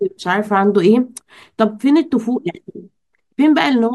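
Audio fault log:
No audible technical faults.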